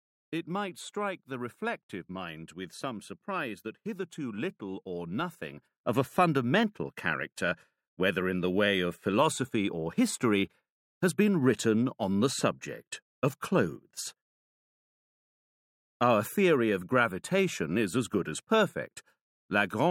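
At 5.80 s the level steps up by about 9 dB in one go and stays there to the end, with the background noise lifting right along with the sound. That's a sudden gain jump, likely a digital gain change applied instantly with no ramp.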